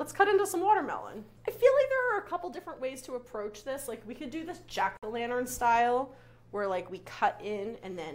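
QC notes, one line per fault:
4.97–5.03 s, gap between stream segments: a hole of about 55 ms of silence with hard edges on both sides. The timestamps of two neighbouring segments fail to meet, so the player pads the space with silence. Unlike a dropout, nothing is lost: the sound resumes exactly where it stopped, only about 55 ms later. This is a lone gap near the 5-second mark, in a stream cut into 2-second segments.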